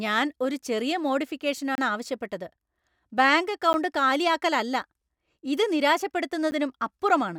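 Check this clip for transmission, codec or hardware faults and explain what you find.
Three blocks of digital silence break up this speech clip. The first runs from 1.75 to 1.78 s, about 27 ms, and is heard as a short hole. At 3.73 s and 6.51 s, 10 ms blocks sound like ticks. The sound cuts out and back with no fade. Lost-packet concealment would instead smear or repeat sound across the gap.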